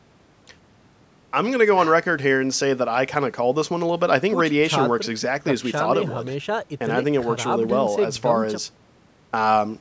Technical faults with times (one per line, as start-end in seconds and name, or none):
none